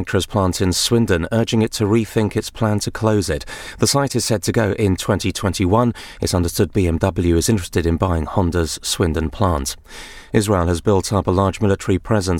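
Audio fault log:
No technical faults can be heard anywhere in this speech recording; the signal holds steady without a single break or disturbance.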